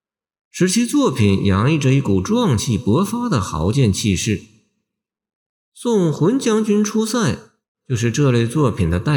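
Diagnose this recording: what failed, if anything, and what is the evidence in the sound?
Nothing failed here; the sound gives no evidence of any fault in the recording.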